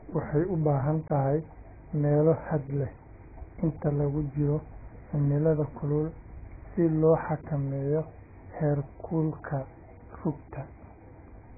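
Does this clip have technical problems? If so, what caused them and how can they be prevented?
Yes. Throughout, the speech sounds dull and muffled, with a smeared, warbly texture and nothing above 2.5 kHz. On a spectrogram, the energy stops at a flat ceiling near 2.5 kHz. This is likely AAC compression, and the heavy damage fits AAC-LC at a very low bitrate of around 12 kbps, where the encoder drops the upper bands and coarsely quantises the rest. Encoding at a higher bitrate, about 64 kbps or more for speech, would prevent it.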